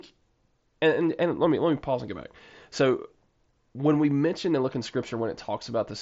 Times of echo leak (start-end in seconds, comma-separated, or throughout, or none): none